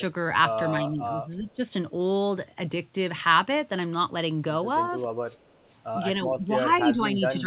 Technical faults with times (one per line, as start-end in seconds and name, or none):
0.80-1.62 speech suppressed in double talk
1.48-1.54 echo leak
5.10-5.65 background gated by the echo canceller
5.48-5.67 echo leak
6.23-6.48 speech suppressed in double talk
6.95-7.21 speech suppressed in double talk